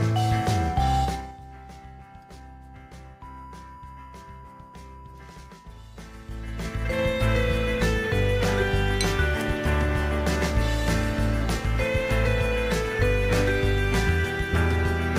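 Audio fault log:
1.02 to 1.37 s, zipper noise: the level drops about 20 dB in 3 dB steps, roughly twenty per second, each jump leaving a tiny click, so a ticking zipper rides the sound during the fall. The steps are audible, not continuous.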